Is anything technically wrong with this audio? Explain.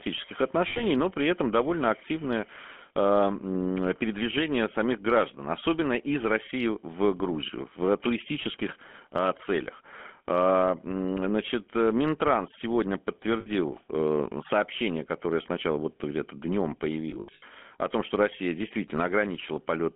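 Yes, there are two problems. The whole clip goes through a GSM full-rate codec. The voice is squeezed into a 200 Hz to 3.4 kHz phone band with a buzzy, gravelly edge. That comes from the pulse-driven vocal-tract model, and the texture fits 13 kbps.

There are also lost GSM frames at 0.68–0.83 s just before "но при этом довольно", at 8.52–8.55 s, and at 13.40–13.48 s before "э сообщение которое сначала". The decoder holds the last good frame, so you hear a short metallic, rough ring. The worst one is at 17.10–17.43 s, before "о том что". About 200 ms is missing, scattered over 320 ms, with runs up to about 70 ms.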